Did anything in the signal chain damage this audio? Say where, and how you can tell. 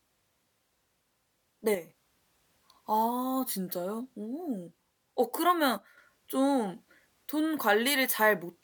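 Yes. One channel drops out twice, at 1.75–1.89 s and 5.77–5.98 s, and the speech steps down by about 6 dB, then recovers. The waveform envelope halves with square edges, and a spectrogram dims evenly across frequency. Likely cause: an intermittent analogue connection losing one stereo side before the mono sum.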